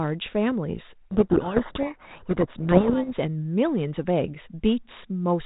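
From 1.13 to 3.12 s there's a codec payload misread: the two ends disagree on the bit order inside each G.726 code word, so the decoder unpacks the samples wrongly and the speech gets buried under harsh, rasping distortion until the packing lines up again, leaving just the light 32 kbit/s G.726 coloring.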